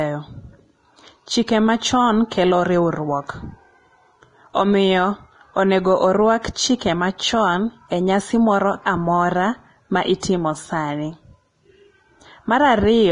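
Throughout the speech, heavy Vorbis compression is the likely cause of a hissy, grainy treble: nothing survives above 10.5 kHz, and the coarsely quantised upper band turns into noise-like texture with smeared consonant onsets. A spectrogram shows a hard ceiling and speckled high-frequency patches, fitting a bitrate near 28 kbps.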